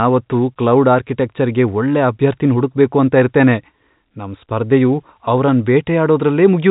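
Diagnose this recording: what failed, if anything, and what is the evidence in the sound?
Nothing in the chain has failed: the speech carries the normal character of G.711 A-law telephone coding at 64 kbps, with nothing above 4 kHz and at most a faint quantisation hiss that follows the level of the signal.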